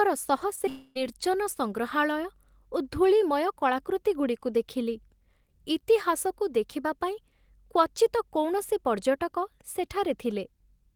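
At 0.55, 0.59 and 0.66 s there is short concealed packet loss. Each event replaces about 20 ms of speech that arrived too late. The decoder extends the previous sound, then fades back into the real signal. The first two run back to back, about 35 ms and 30 ms long. The third is about 30 ms. They sound like quick smears or a wobble at the start of the clip.

From 0.69 to 1.05 s comes a long network dropout, the likely cause of what follows. About 260 ms of speech is lost. The gap never goes silent. Roughly a quarter second of synthetic continuation fills it, a buzzy or hissy extension of the last sound that thins as it goes. Real speech returns with "ସଂଗ୍ରହାଳୟ ଓ ଧୂଳିମୟ କଳାକୃତିଗୁଡ଼ିକୁ", without the stretch that was lost.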